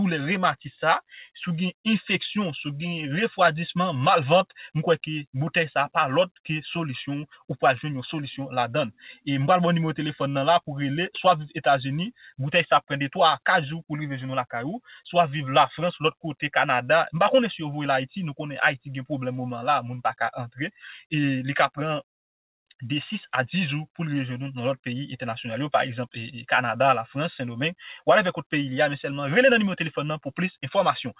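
Nothing here calls for a technical fault to be flagged; the sound comes across a call path the usual way, with its top end stopping at about 4 kHz, and no glitches, dropouts or other problems turn up anywhere along the way.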